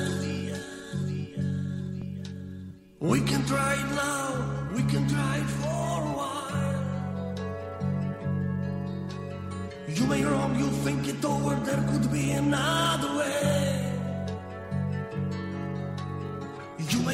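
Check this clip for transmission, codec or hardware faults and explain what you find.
Nothing wrong turns up anywhere in this recording.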